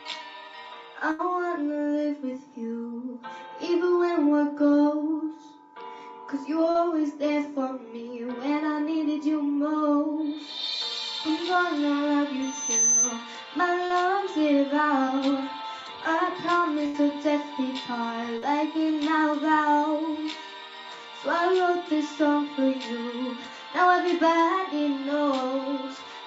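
The audio has come through a call path limited to 8 kHz. It carries two bursts of packet loss, at 1.11 to 1.22 s and 16.86 to 16.97 s. Each time about 80 ms of audio never arrived. The receiver stretched the last sound over the hole, for 74 ms and then 81 ms, fading it out. The audio then resumes further on, with that stretch missing. Short concealed packet loss occurs at 6.71 to 6.78 s, 13.87 to 13.93 s and 18.38 to 18.45 s. Each drop loses 40 ms. The decoder bridges it with 32 to 42 ms of continued sound, then blends back. This is heard as a brief smear or wobble. A loudspeaker feedback squeal runs from 12.42 to 13.25 s. A mic is hearing its own loudspeaker, and the loop gain has passed one at 6.2 kHz. That tone grows over roughly 0.4 s, to about 5 dB above the signal.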